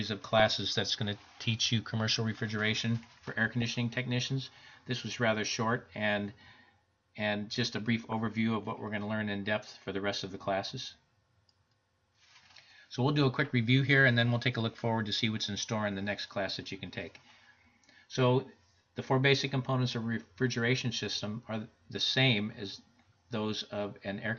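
Across the whole clip the sound is dull and plainly gurgling, with a granular edge and upper detail that comes and goes. That points to MP2 compression. Likely at a low rate around 80 kbps, sub-bands starve of bits and drop out or turn coarse.

DAB burbling appears from 0.38 to 0.70 s, as a brief burst at 3.62 s, and again from 8.04 to 8.27 s: bursts of noise over the programme. Bit errors at a fraction of a percent slipped past error correction, putting short blips of noise into single sub-bands.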